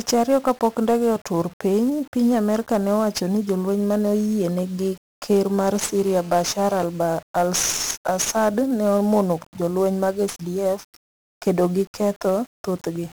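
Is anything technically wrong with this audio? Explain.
Yes, there are two faults.

Across the whole speech clip there is 1-bit DFPWM compression. Each sample is stored as a single bit that nudges an adaptive level up or down, so the waveform is only roughly traced. The result is heavy broadband quantisation noise: everything sounds fuzzy and crackly, and the treble sinks under hiss. The density of the damage fits a stream of about 48 kbps. Unlike the swirly, watery artefacts of a perceptual codec, this grain is constant and tied to the signal.

From 5.75 to 6.85 s, just after "oyiene gi ker mar", there is GSM phone buzz. A nearby 2G handset on a call transmits in bursts 217 times a second, and the audio circuitry rectifies those radio pulses into sound. It comes through as a hard, raspy buzz at 217 Hz with many harmonics, about 21 dB below the speech and steady throughout the stretch. 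Mains hum, by contrast, sits at 50 or 60 Hz and sounds smooth. This buzz is higher and harsher, and it has no relation to the speech.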